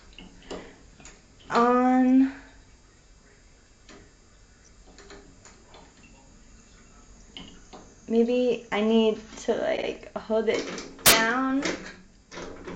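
The audio stutters at 9.76 s to 9.86 s. This is repeated frames. A short 52.2 ms block of compressed data plays again, twice over. That fits a small run of frames being written more than once. It adds 104.5 ms to the running time. At 11.06 s to 11.12 s there is a harsh crack. This is integer overflow. The loudest peaks go only about 1 dB past the limit. Instead of clipping, they wrap around to the opposite sign. Each one jumps across the full range, far sharper than ordinary clipping.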